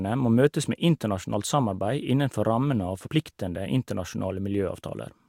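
Speech with compressed frames skipped at 3.06–3.08 s: roughly two frames, about 40 ms, vanish, and the audio jumps ahead by that much.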